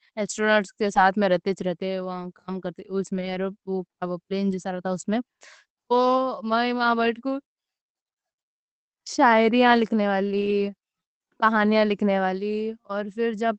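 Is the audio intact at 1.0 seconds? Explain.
No. At 0.95 to 0.97 s, just before "میں رہتے وہاں کام", a lost packet was rebuilt from error correction. One 20 ms packet went missing, and the decoder played the low-bitrate backup copy carried in the next packet. The stream has no gap, but that 20 ms sounds rougher and noisier than the surrounding audio, a brief grainy patch. The Opus call path's 8 kHz band limit applies throughout, so no extra top-end dip occurs.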